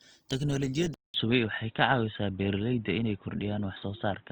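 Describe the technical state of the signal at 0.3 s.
Opus compression, likely CELT mode near 24 kbps, runs throughout: starved bands get noise fill, so at 0.3 s the speech sounds grainy and rough.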